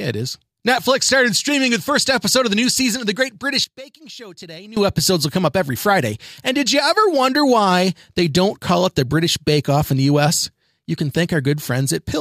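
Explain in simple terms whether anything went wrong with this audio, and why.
From 3.64 to 4.77 s the speech suddenly drops out to a faint trace, then returns at full strength. This is most likely one channel inverted: one side's signal got flipped upside down, so when both sides combine, the shared speech largely cancels itself out.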